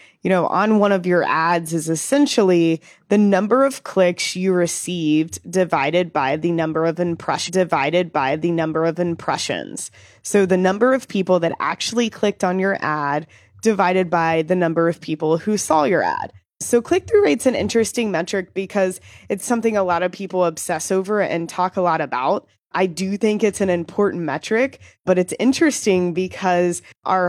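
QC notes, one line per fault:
7.43 to 9.43 s, stream segment repeated: just after "by the number of", the speech jumps back and replays about 2.0 s of what was already heard, with a small blip at the join, so the clip gains that much time. The player fetched or queued the same chunk twice. Unlike a buffer stutter, which loops a few tens of milliseconds, or an echo, which overlaps itself, this is one clean, whole repetition of a roughly 2 s block.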